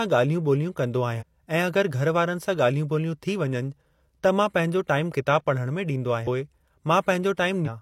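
Damaged data in a compressed stream appears three times in this speech: from 1.16 to 1.23 s, from 6.23 to 6.27 s, and from 7.62 to 7.69 s. At each point some compressed frames hold corrupted bytes. The decoder either misinterprets them or discards them, loses its place in the stream, and must find the next valid frame header before normal decoding resumes. Each 48 to 68 ms break is heard as a short chirp, squawk, click or short hole cutting into the speech.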